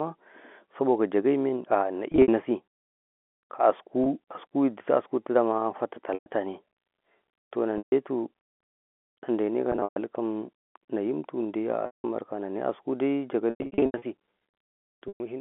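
Packet loss with pitch repetition hits at 2.12, 4.04, 6.14, 7.78, 9.72, 11.86, 13.5 and 15.08 s. The receiver loops the last pitch period over the gaps, 20 to 360 ms lost per burst, giving a held buzz that fades. That buzz sets it apart from plain silent dropouts. The audio sits in the narrow telephone band.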